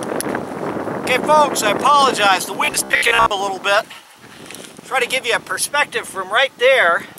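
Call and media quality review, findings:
Robotic sound from repeated short buffers, 2.65–3.31 s: rigid 66.7 Hz buzz, about half repeated. Likely late input; fits 15 ms chunks looped, real audio skipped.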